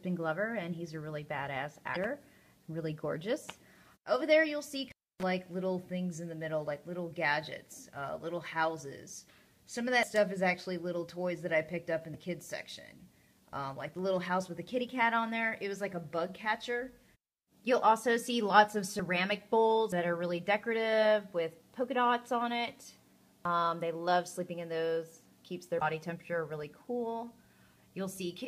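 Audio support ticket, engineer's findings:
Damaged data in the compressed stream at 1.92–1.97 s and 25.78–25.82 s. Corrupt bytes in the encoded frames at these points. The decoder misreads them, loses frame sync and hunts for the next valid header. Result: a brief chirp or blip of roughly 40 ms each time. Check the source file or stream transport for corruption.

Intermittent contact at 4.86–5.23 s. A loose cable or plug on the analogue path opens for about 281 ms. Result: the sound cuts out, leaving faint hiss for the duration of the break, with crackle at both edges as the contact breaks and remakes. Reseat or replace the connector.

A jump in the sound at 10.03, 12.14, 18.99, 19.92 and 23.45 s. No gap of silence; the two sides butt directly together. Roughly 70 ms goes missing at 10.03, 19.92 and 23.45 s, and roughly 20 ms at 12.14 and 18.99 s. Likely cause: dropped buffers from input overrun. 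The capture software fell behind and the hardware overwrote samples before they were read. Review thread priority and buffer settings.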